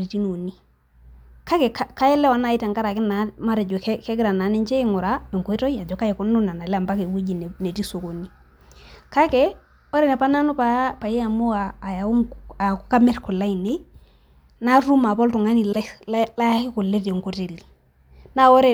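At 15.71–15.76 s, repeated frames: a single compressed block of about 26 ms plays twice, producing a brief stutter and lengthening the speech by that 26 ms.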